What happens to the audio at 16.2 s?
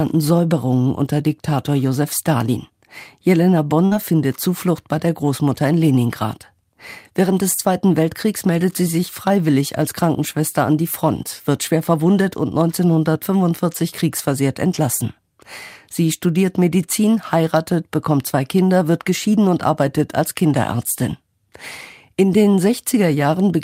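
Nothing goes wrong at 16.2 s; the speech carries on intact through that moment.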